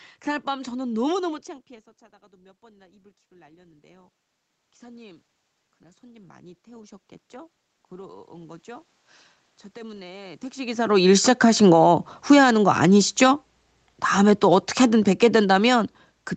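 From 5.82 to 8.95 s, automatic gain rising lifts the level by about 6 dB; room noise swells with the voice, unlike a talker moving closer.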